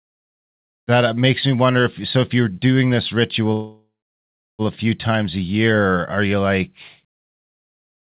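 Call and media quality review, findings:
Call audio freeze, 3.53–4.62 s, after "if you're doing this": sound stretched into a fading buzz, then about 0.71 s silence; resumes at "a few times a" with nothing lost. Likely jitter buffer underrun from delayed packets; playout pushed back about 1.06 s.

Call path: nothing above 4 kHz, which fits a narrowband 64 kbps G.711 mu-law codec.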